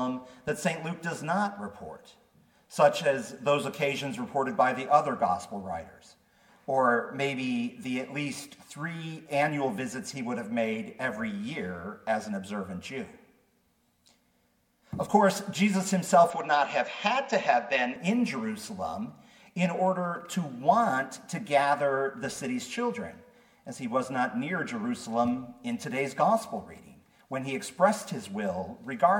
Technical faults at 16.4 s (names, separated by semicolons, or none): input switched to a poorer device